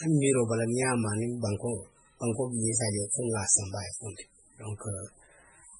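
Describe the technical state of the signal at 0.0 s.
At 0.0 s the speech already sounds watery and swirly, with nothing above 10.5 kHz, likely heavy MP3 compression at a bitrate near 16 kbps, running the whole clip. Unlike a plain low-pass filter, weak frequency lines switch on and off between frames.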